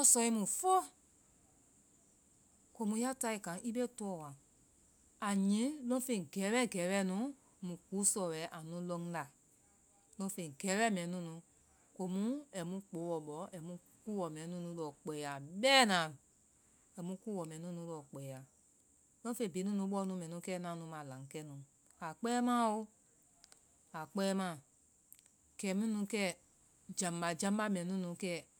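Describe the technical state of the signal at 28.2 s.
At 28.2 s the speech signal is intact, with no audible dropout, clipping, glitch or other technical fault at that moment.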